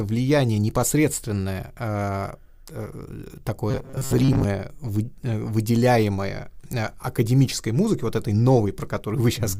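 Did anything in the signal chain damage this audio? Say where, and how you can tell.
Yes. Starved driver buffers likely repeated short chunks: from 3.71 to 4.44 s the speech becomes robotic sound, a rigid 133 Hz buzz that fits roughly 7.5 ms repeats.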